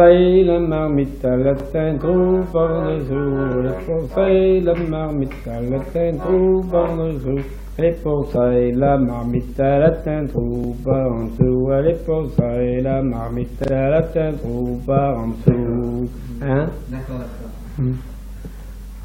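The playback device ran short of fresh audio three times and replayed its last buffer, a repeated buffer fault. Each repeat lasts about 40 ms, which fits a 40 ms buffer. The same fragment plays an extra time at 1.6 s and 10.64 s, and twice more at 13.64–13.72 s, giving brief stutters with hard joins while essentially no audio is lost.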